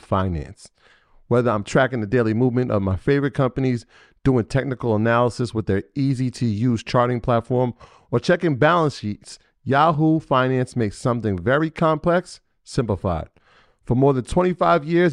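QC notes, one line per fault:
No faults heard.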